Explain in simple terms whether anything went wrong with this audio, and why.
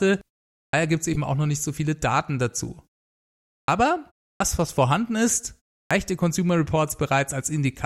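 Two things went wrong. The playback device dozes off during pauses, so each restart loses its first 70–83 ms. This is a clipped start after a pause, at 0.65 s (before "gibt es"), 3.61 s, 4.33 s (before "was vorhanden") and 5.83 s.

Separately, a corrupt frame was decoded: damaged compressed data was played anyway. This causes brief chirps or noise bursts at 1.13 s (between "gibt es" and "auch noch nicht so"), 2.67 s and 6.87 s.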